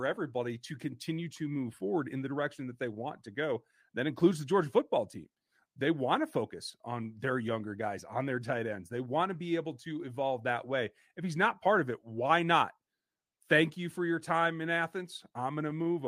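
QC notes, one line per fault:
No faults found.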